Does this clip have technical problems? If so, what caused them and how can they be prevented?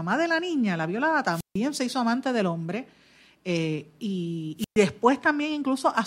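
Yes. A wireless microphone squelch dropout occurs twice, at 1.31–1.59 s (after "la niña la violada", before "se hizo amante del") and at 4.57–4.78 s. Each time, the FM radio link fades and the receiver's squelch cuts the output, so a brief swell of hiss gives way to about 150 ms and 120 ms of near-silence before the speech returns. Keeping clear line of sight, placing antennas well, and using a diversity receiver keep the signal above the squelch threshold.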